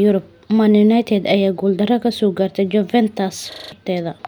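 From 3.52 to 3.72 s the speech locks into a system hang loop. A 40 ms slice of audio repeats exactly five times, a stutter at 25 Hz. The system froze while the hardware kept replaying one buffer. Around a fifth of a second of speech is lost.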